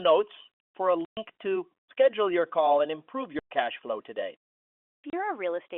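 Packet loss filled with silence cuts this telephone-band speech recording at 1.05–1.17 s, 3.39–3.51 s and 4.91–5.13 s. The receiver played silence where packets went missing, leaving abrupt gaps of 120 ms, 120 ms and scattered holes totalling 180 ms. These gap lengths fit 30 ms packets.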